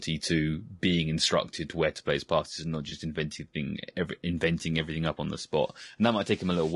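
A speech clip with low-delay AAC compression as its likely cause throughout. The short frames resolve the voice's harmonics coarsely, and the damage is plainly audible. Speech sounds rough and grainy, with noise filling the gaps between harmonics and a thin, synthetic-sounding top band, which fits a bitrate of around 32 kbps. On a spectrogram the harmonic stripes look blurred and speckled, with hazy energy between them and a patchy, smeared upper region.

At 2.89 to 2.92 s, right after "his passes and not" and before "inventing thing every inventing", there is an AAC frame loss with concealment. The decoder bridged the gap by reusing and reshaping the previous spectrum. The result is a brief smeared, phasey blip rather than a silence, which fits a single lost 20 ms frame. On a spectrogram it shows as a short vertical band where the harmonic detail turns into a flat, noisy smear. The waveform keeps its level but loses its regular periodic shape for that instant.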